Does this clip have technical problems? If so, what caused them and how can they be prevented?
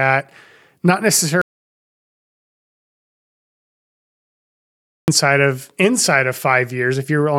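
Yes. There's an audio dropout to silence from 1.42 s to 5.08 s, so roughly 3.7 s of the speech is simply gone. It cuts off mid-flow and the gap is silent, with no room tone at all, which tells you the input itself vanished while the recorder kept writing. That's likely a dropped connection, a loose cable or wireless link, or an accidental mute somewhere upstream. To prevent it, secure cables, monitor levels live, and run a backup recorder.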